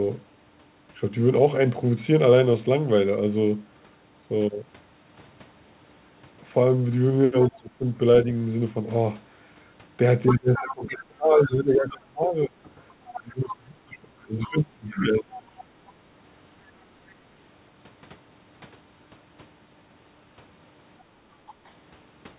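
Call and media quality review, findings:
Speech suppressed in double talk, 7.48–8.26 s, 10.29–12.54 s and 13.14–15.57 s. Likely echo canceller failing to separate near-end speech from loudspeaker echo during overlap. Near-end level dips by up to about 20–25 dB, around two seconds affected in the longer spans.

Other side's voice leaking through, 10.26–10.73 s, 11.38–11.92 s, 13.05–13.21 s and 14.93–15.64 s. Likely residual loudspeaker echo left in the microphone signal by the canceller. Far-end speech is audible in short scraps, about 10 dB below the talker at first and about 15–20 dB below later.

Background gated by the echo canceller, 20.98–21.7 s. The canceller clamps the microphone while the loudspeaker plays. The room sound drops by about 10 dB for roughly 0.3 s in total, then recovers. Band-limiting to 4 kHz throughout fits a 64 kbps G.711 mu-law call path.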